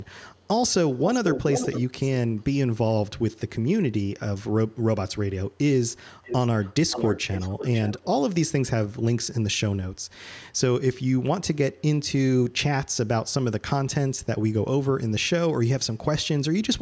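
Delayed repeats of the speech surface at 0.0–0.07, 0.3–0.48, 0.97–1.05, 1.25–1.83, 2.37–2.43 and 6.22–8.07 s. They trail by 384 ms, then 436 ms, then 504 ms. Three are faint, but the 1.25 s stretch nearly matches the speech. This echo leak is likely a loudspeaker's echo canceller letting its microphone pickup return.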